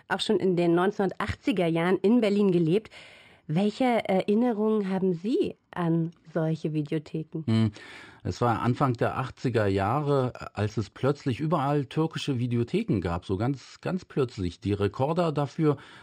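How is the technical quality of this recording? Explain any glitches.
The recording has one fault, present throughout: imaging from linear upsampling. The speech was raised in rate by drawing straight lines between samples. That fits a 12 kHz original. Detail just below 6 kHz is dulled. Faint mirrored copies fill 6 to 12 kHz, roughly 35 dB down. They add a light metallic shimmer to sibilants.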